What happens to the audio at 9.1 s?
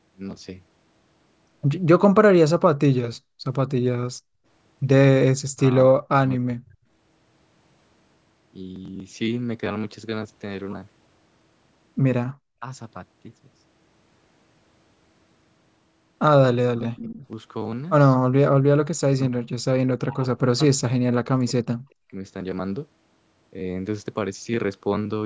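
Nothing goes wrong at 9.1 s; the speech there comes through intact, with only the ordinary call microphone processing shaping it, its band reaching no higher than about 8 kHz.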